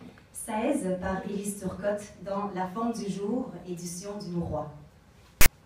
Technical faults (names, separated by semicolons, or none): file tags played as audio